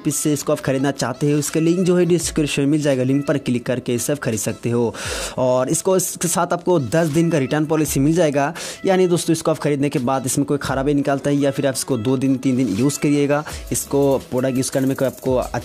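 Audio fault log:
Nothing to log here, as there's not a single fault to be heard anywhere in this audio.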